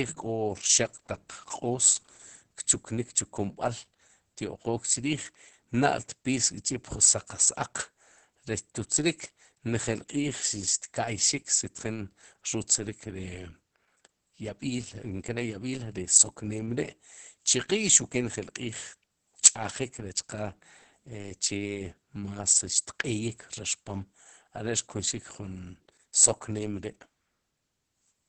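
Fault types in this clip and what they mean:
Opus voice compression: a linear-prediction speech coder at a low bitrate, which fits about 10 kbps in wideband mode, leaves the speech muffled, hoarse and faintly robotic throughout. On a spectrogram energy stops sharply near 8.6 kHz, with smeared, coarse harmonics below.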